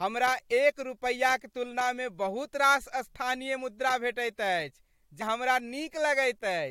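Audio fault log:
5.20 s, compressed frames skipped: about a tenth of a second of the speech goes missing as the decoder jumps ahead past a handful of lost or rejected frames, which fits four frames of 21.3 ms.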